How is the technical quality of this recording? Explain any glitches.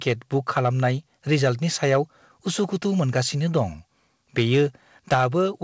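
The recording has audible distortion and one sudden level drop. The sound passes through a call codec that removes everything above 8 kHz, which fits G.722 at 64 kbps.

Microphone overload happens at 0.56–0.86 s, 1.92–1.96 s, 4.38–4.63 s and 5.12–5.25 s. The peaks run flat against the converter's ceiling, by about 2 to 9 dB. The cause is likely an input gain set too high. Loud syllables gain a harsh, crackling edge. It is worst at 5.12 s.

A microphone volume step-down occurs at 5.14 s, right inside the heaviest overload. The input level drops by about 4 dB in one jump. This is likely the call software reacting to the clipping by lowering the device's gain. Voice and background both get suddenly quieter.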